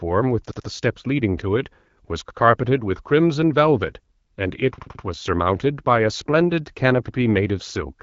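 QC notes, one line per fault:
0.51 to 0.68 s and 4.78 to 5.04 s, repeated buffer: the same 85 ms piece sounds again, twice then three times, with a hard join at each repeat. This points to a 4096-sample buffer replayed when new audio arrived late. Unlike a dropout, there is no silence, and nothing seems lost.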